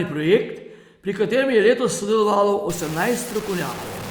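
From 2.70 s to the end, the speech turns grainy and gritty. This is likely low bit depth without dither, truncation to about 5 bits, leaving noise only about 15 dB below the signal.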